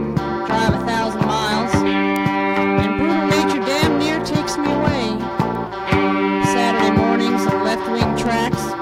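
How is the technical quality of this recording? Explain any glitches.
The music carries a recurring digital fault: word clock ticks. From 0.13 s to 8.26 s, about fifteen short ticks land roughly every 0.7 s. The receiving device was running on its own clock rather than locking to the source, with a mismatch on the order of 30 ppm. Each time the two clocks slipped a full sample apart, a single sample was dropped or repeated, leaving a brief click at a near-constant rate.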